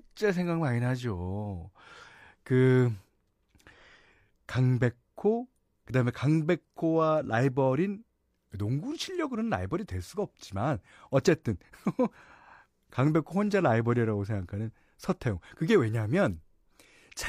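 Nothing stood out as a problem on listening to this recording.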